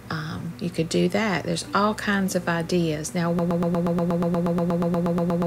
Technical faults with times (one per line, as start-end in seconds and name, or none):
3.39-5.46 broken-record loop